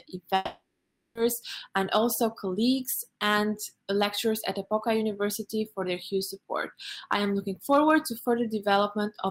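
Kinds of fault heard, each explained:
Long network dropout: Near 0.35 s the sound turns into a fading buzz or hiss lasting about 0.8 s. The likely cause is lost packets, and the gap never returns.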